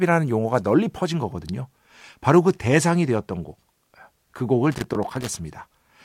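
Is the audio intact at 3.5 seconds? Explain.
Yes, the speech runs through 3.5 seconds intact, with no break, dropout or other fault at that point.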